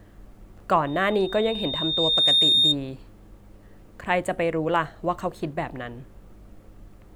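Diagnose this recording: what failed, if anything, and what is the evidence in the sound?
Loudspeaker feedback squeal, an analogue acoustic-loop failure at the microphone and loudspeaker stage, runs from 0.86 to 2.76 s in this speech recording. A pure tone near 3.7 kHz swells over roughly one and a half seconds until it sits about 10 dB above the speech. The mic was picking up its own loudspeaker, and loop gain exceeded one at that frequency. On a spectrogram it is a single bright horizontal line that thickens as it grows. The waveform envelope rises steadily underneath the speech.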